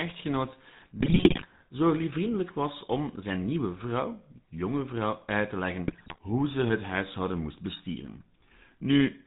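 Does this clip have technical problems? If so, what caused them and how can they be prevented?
Yes. GSM full-rate codec damage runs through the whole clip. Nothing above 4 kHz survives. The voice has a buzzy, gravelly edge from pulse-driven vocal-tract coding, which fits the 13 kbit/s full-rate coder. Using a wideband codec such as AMR-WB would prevent it.

GSM bit errors break the speech into squawks and gargling. The first burst runs from 1.00 to 1.46 s, ending before "zo liefvriendelijk was om". The second runs from 5.88 to 6.19 s, between "vrouw uit te leggen" and "hoe ze het huishouden". Corrupted filter, pitch and gain values distort each damaged frame. A stronger radio link would prevent this.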